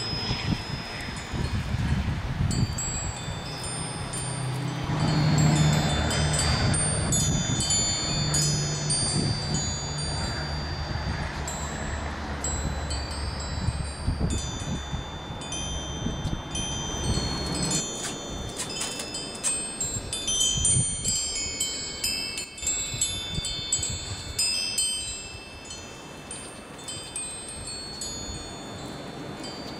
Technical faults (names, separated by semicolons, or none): one channel drops out